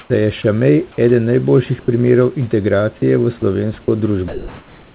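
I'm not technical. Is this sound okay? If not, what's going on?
No. Two related faults are audible.

Sound dropped by the voice detector: at 0.0 to 0.1 s, just before "da je", at 0.92 to 0.98 s, just before "eden najboljših primerov", and at 2.98 to 3.02, 3.40 to 3.42 and 3.82 to 3.88 s, short pieces of speech vanish into a plain hiss. The likely cause is the caller's system mistaking quiet speech for silence and briefly stopping sending.

Comfort noise in place of the background: at 1.80 to 1.88 s, right after "eden najboljših", and from 4.28 s to the end, the real room sound is replaced by a smooth, even hiss, likely generated by the receiving end during a pause. Unlike the dropouts, no speech goes missing here. Only the background changes character.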